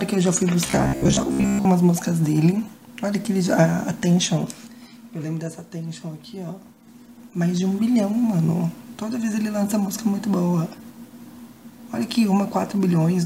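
From 0.66 to 1.68 s, robotic sound from repeated short buffers: most of the stretch becomes a rigid 66.8 Hz buzz, likely from a roughly 15 ms buffer replayed, still tracking the sound's contour, unlike steady hum.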